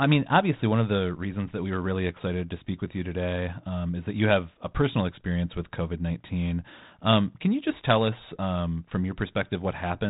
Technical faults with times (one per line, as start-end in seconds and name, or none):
none